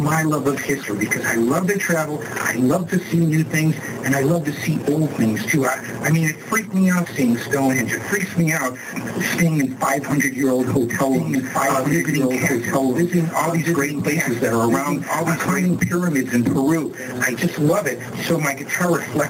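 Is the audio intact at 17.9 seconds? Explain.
No. At 17.9 seconds the audio shows gain pumping, which runs through the whole clip rather than starting or stopping there. The level swings by roughly 15 dB. The likely cause is input gain set far too high, with a fast limiter or compressor clamping down on every peak, so loud and quiet passages sit unnaturally close in level and the sound is squashed.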